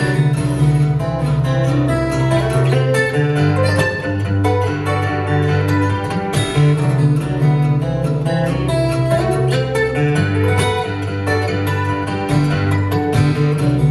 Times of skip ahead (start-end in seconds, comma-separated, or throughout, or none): none